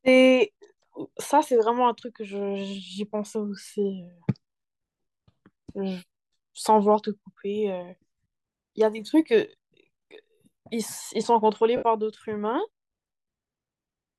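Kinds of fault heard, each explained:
Lost LE Audio frames: Around 8.23 s the speech breaks into a brief rough, hissy smear, with gaps scattered over about 180 ms and the longest lasting roughly 30 ms. At 11.77 to 11.83 s a single 60 ms dropout sounds similarly grainy. Frames from the Bluetooth LE Audio link went missing, and the LC3 decoder filled each gap by replaying the last spectrum with randomised signs, so voiced sound loses its tone and becomes noise-like.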